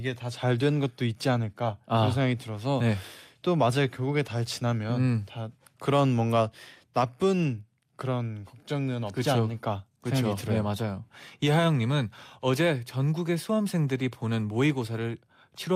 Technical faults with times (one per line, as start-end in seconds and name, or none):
none